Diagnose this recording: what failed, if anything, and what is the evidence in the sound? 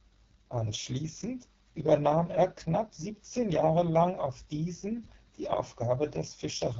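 The failure is at the codec stage: the speech has passed through the AMR wideband (HD Voice) codec, and the heavy rough, raspy texture throughout points to its lowest mode, around 6.6 kbit/s. A spectrogram shows noise-like shading near the top and nothing above 7.3 kHz, where a ceiling appears.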